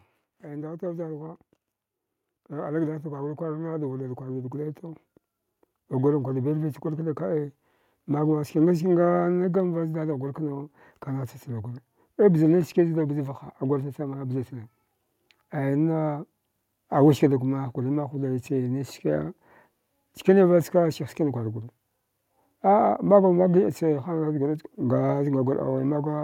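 From 0.43 s to 7.46 s there's automatic gain rising: the AGC decided the input was too quiet and slowly wound its gain up by about 12 dB. You hear the speech and the room noise behind it swell together over those seven seconds.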